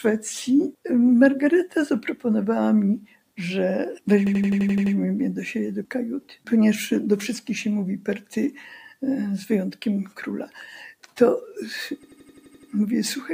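A speech-oriented noise suppressor has been left running on material that isn't speech. Throughout the clip it treats held tones, ambience and decaying tails as noise and pulls them down, while attacks pass mostly intact. The result is a level that pumps and flutters by around 5 dB as the suppressor's gain rides up on onsets and sinks between them, with sustained parts thinned out.

In two places the sound is cut by the noise suppressor more heavily than elsewhere: from 2.99 to 3.38 s and from 6.20 to 6.47 s. In each the level drops by about 11 dB at its deepest, and roughly a fifth of a second of material is pushed down. Sustained and fading content suffers most, with tails truncated instead of decaying naturally.

Two system hang loops also occur, from 4.27 to 4.95 s and from 12.03 to 12.72 s. In both, an 85.33 ms fragment repeats exactly eight times, giving a mechanical stutter at 11.7 Hz. 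This is the signature of the host or driver stalling while the audio hardware keeps replaying its ring buffer, and the loop length fits a 4096-sample buffer. No audio appears to be dropped around the loops.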